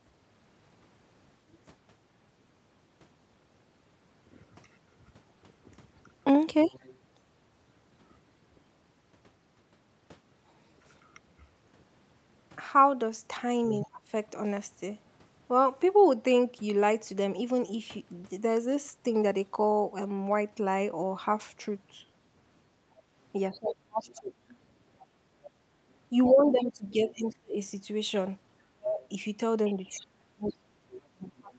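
At 6.59 to 6.98 s and 13.72 s, faint scraps of a second voice sit about 15 to 20 dB under the talker. This is the other side's voice leaking through, likely loudspeaker echo the canceller missed.

From 13.82 to 14.03 s and 23.51 to 24.33 s, the talker dips by up to about 30 dB. This is speech suppressed in double talk, likely the canceller turning both voices down at once.

From 24.08 to 27.34 s, the second voice leaks again, about 15 dB down.

At 24.98 to 25.38 s, the room sound drops by about 12 dB for 0.4 s, then returns. This is background gated by the echo canceller.

From 26.11 s to the end, the talker is suppressed again. Leaked voice returns from 29.02 s onward.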